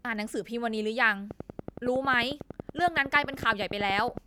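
Something, likely interference from nearby equipment or a faulty connection or power supply, starts injecting pulses at 1.31 s and keeps going to 4.18 s: a train of clicks, around thirty, evenly spaced at 10.8 per second, ticking roughly 10 dB above the speech, pauses included.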